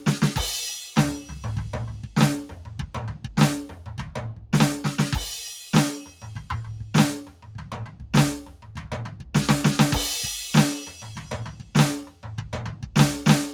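Throughout the music, sustained parts pump and thin by a few decibels, because a noise suppressor tuned for speech stays on and treats held tones and ambience as noise. The noise suppressor cuts sound harder at 0.85–1.31 s (about 8 dB), 3.71–4.53 s (about 9 dB), 6.06–6.43 s (about 9 dB), 7.26–9.34 s (about 10 dB) and 10.9–12.25 s (about 10 dB). In each span the steadier, fading sound sinks and its decay is chopped short.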